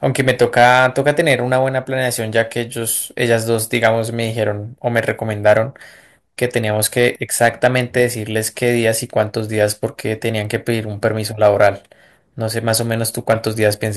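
Crackle and a brittle edge flare on the loudest peaks of the speech from start to finish. This is hard clipping: the signal runs about 6 dB hotter than a stage can pass, so a small fraction of peaks are sliced flat, adding harsh high harmonics.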